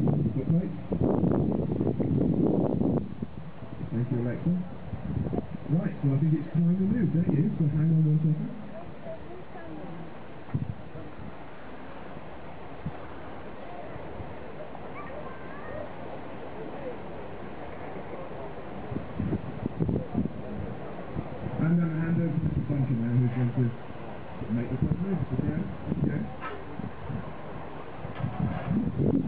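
No technical faults can be heard anywhere in this audio. Nothing in the signal calls for a time, a value or a cause.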